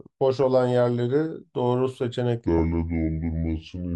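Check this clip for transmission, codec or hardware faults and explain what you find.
Two faults are present in this speech clip.

At 0.42 s there is a brief burst of DAB burbling. Residual bit errors, at a low rate, slipped past error correction into the MP2 data and produced short blips of noise in single sub-bands.

From 2.46 s to the end, a section at the wrong speed plays at 0.694 times normal speed, so the speech drops about seven semitones and drags. This is likely from playback against a mismatched clock.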